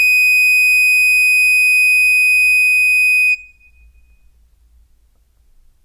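Nothing in this music clip stood out as a technical problem on listening.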